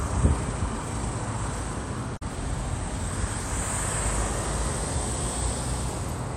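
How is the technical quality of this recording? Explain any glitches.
One glitch is audible. From 2.13 to 2.23 s, damaged data in the compressed stream makes the decoder misread frames and resynchronise, producing a brief chirp, squawk, click or short gap.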